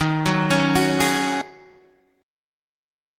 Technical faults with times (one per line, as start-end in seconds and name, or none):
1.41-1.43 skip ahead
1.51-3.13 jitter buffer speed-up